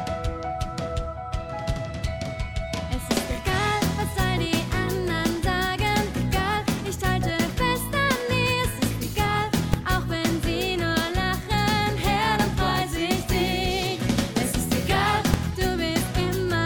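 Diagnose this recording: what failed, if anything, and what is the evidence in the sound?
A processing stage failed with invalid numbers at full scale. Single loud bangs land at 9.74 s and 15.34 s. In each, a calculation produced infinite or invalid values that were clamped to the largest sample value for a block of about 2.9 ms, which fits a 128-sample buffer. Because the block is so short, the two edges merge into one bang. The waveform shows each block sitting flat at one extreme value, far beyond the audio's peaks, and the spectrogram shows a thin broadband vertical stripe.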